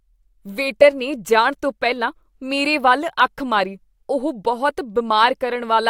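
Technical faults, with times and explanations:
Nothing technical stands out here; the speech comes across without any audible faults.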